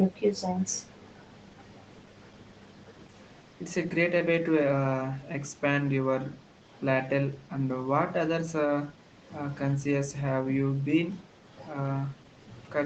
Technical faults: none

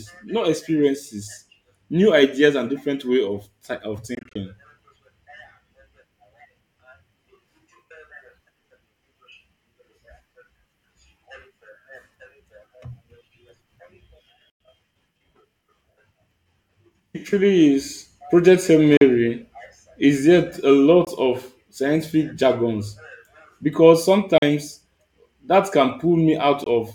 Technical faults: Bluetooth dropout

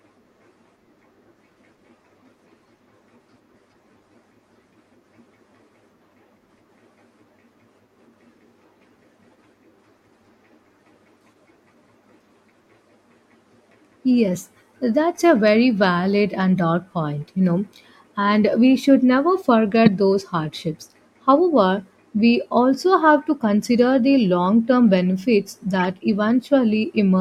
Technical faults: corrupt frame decoded

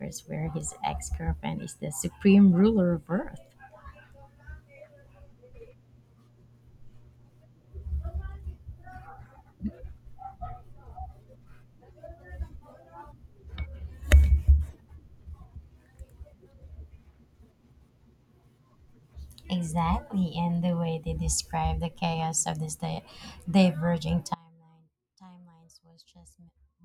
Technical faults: audio dropout to a faint residue

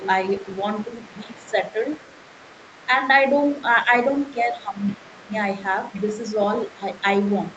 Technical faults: other side's voice leaking through; speech suppressed in double talk

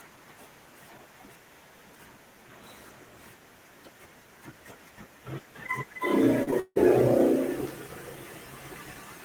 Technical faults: short concealed packet loss; long network dropout

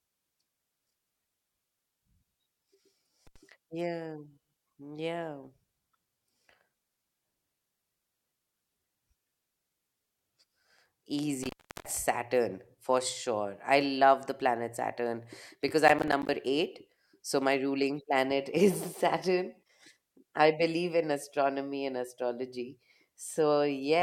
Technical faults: intermittent contact; processor overload crackle

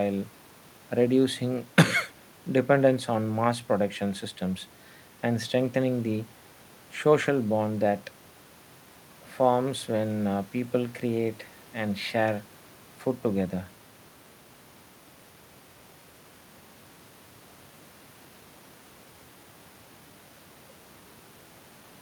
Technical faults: none

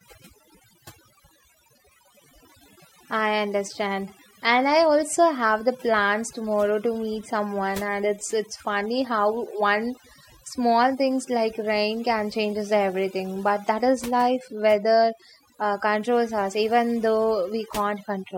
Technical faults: overdone noise removal

